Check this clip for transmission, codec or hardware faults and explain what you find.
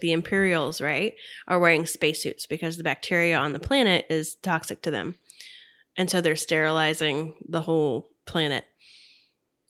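No transmission, codec or hardware faults.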